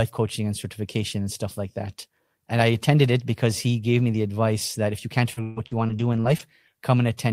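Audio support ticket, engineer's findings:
Repeated packet loss (robotic sound), 5.33 to 6.41 s, right after "that if you can't". Choppy speech with pieces missing. Network/jitter buffer path. Successive holes patched by extending prior sound, longest gap 135 ms. About 27% of the stretch concealed, around 300 ms missing outright.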